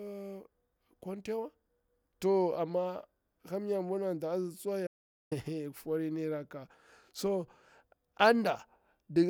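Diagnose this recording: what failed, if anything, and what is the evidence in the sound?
An audio dropout to silence cuts the speech off mid-flow at 4.87 s and brings it back abruptly at 5.32 s, so about 0.44 s of audio is missing. The gap holds no room tone at all. On a waveform it is a flat line, and on a spectrogram a fully black vertical band with hard edges. The recorder kept writing digital silence while its input was likely lost upstream, at the capture device or its link.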